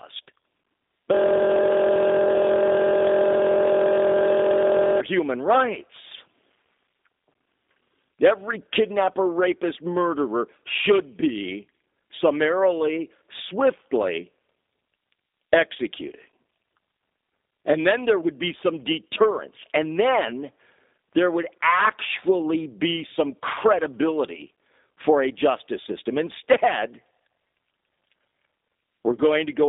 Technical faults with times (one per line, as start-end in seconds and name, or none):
0.00-29.69 G.729 codec
1.14-5.00 system hang loop